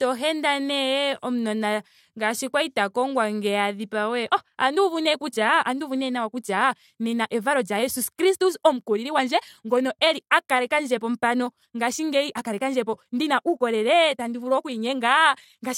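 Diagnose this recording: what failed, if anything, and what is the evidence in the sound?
A time-stretched section runs from 4.2 s to the end, just after "ta kongwa ngeya a": the speech abruptly speeds up about 1.45 times with unchanged pitch, sounding rushed. The likely cause is time-compression in processing, dropping short slices to shorten the audio.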